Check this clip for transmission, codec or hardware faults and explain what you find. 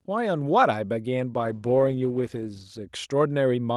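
There's one real fault here, a call bitrate drop in the speech from 1.36 to 2.85 s. The call's bandwidth estimate sagged and the encoder had to squeeze into far fewer bits, roughly consistent with a fall from around 64 kbps to 16 kbps. Coarser coding makes that stretch sound rough and watery, with the top end dulled, until the rate recovers. Outside that window the Opus call path adds its usual coding noise and cuts off everything above 12 kHz.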